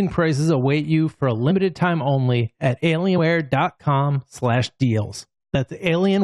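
The decoder dropped compressed frames, so the audio jumps ahead, each time by a multiple of one frame, which fits a frame length of about 23 ms. At 1.5 s, between "await you for a" and "time only at", roughly one frame is lost. At 3.17 s, after "time only at", about four frames (around a tenth of a second) vanish. At 5.54 s, about one more frame goes missing. Each join is heard as a sudden jump ahead in the speech.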